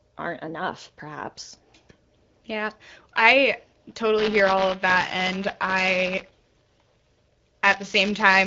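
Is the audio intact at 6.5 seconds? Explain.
No. Buffer tearing runs from 4.18 s to the end: each period splices in audio about 20 ms stale, a 200 Hz rattle that, unlike dropouts, stops in silence.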